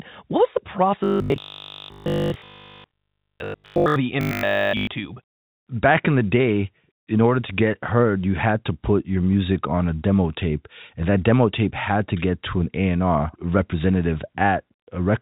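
From 1.04 to 3.96 s, and again from 4.21 to 4.87 s, the speech turns into robotic sound from repeated short buffers, a rigid, metallic 50 Hz buzz that only loosely follows the words. Audio was likely arriving too seldom, so playback kept looping the last fragment, which fits a 20 ms buffer, and almost nothing new got through. A spectrogram shows evenly spaced 50 Hz harmonic lines cut off at 4 kHz by the telephone band, and the waveform repeats roughly every 20 ms.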